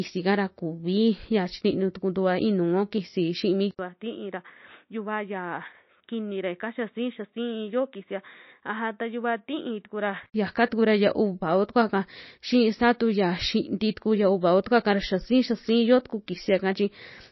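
From the start, the speech has a watery, swirly quality, with metallic chirps on s sounds and smeared attacks, and nothing is present above 5.8 kHz. This is most likely MP3 compression at a low bitrate, around 26 kbps, where the encoder drops weak frequency lines frame by frame and cuts the treble.

At 3.71 s an 80 ms silence is followed by duller, boxier sound, limited to 3.8 kHz, about 10 dB quieter, with a new noise floor roughly 45 dB down. The likely cause is the input switched to a poorer device, which remains in use until 10.34 s.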